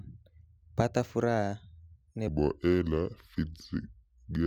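From 2.27 s to the end of the clip at 4.46 s there is a section at the wrong speed. The likely cause is that this stretch was played back against the wrong clock, running at 0.733 times its recorded rate. Because speed and pitch move together, the speech abruptly becomes slower and deeper, dropping by about five semitones. Syllables drag and vowels stretch out, and the voice takes on a heavy, sluggish tone until the audio ends.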